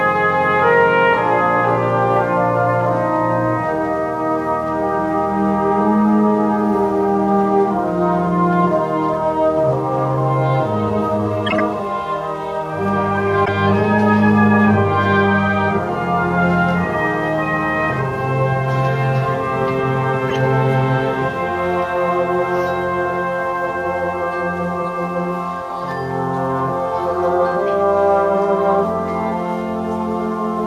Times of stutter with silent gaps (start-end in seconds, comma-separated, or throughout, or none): none